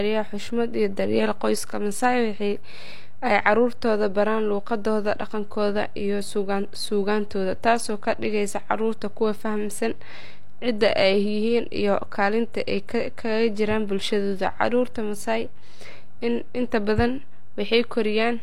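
Nothing odd is audible in the speech itself, but a DC offset runs the whole clip: the waveform sits shifted off zero, wasting headroom and leaving steady energy at 0 Hz.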